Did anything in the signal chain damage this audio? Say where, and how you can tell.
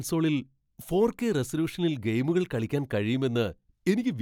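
No, nothing in the signal chain audibly damaged this speech recording, and the signal holds steady and intact throughout with no sign of a problem at any stage.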